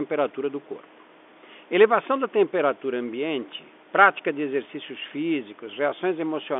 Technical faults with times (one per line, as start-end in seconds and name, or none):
none